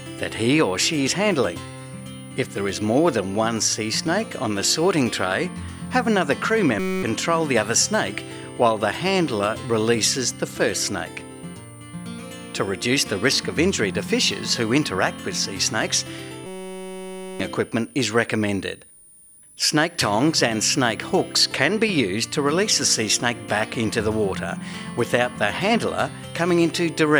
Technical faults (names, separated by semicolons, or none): switching supply whistle; system hang loop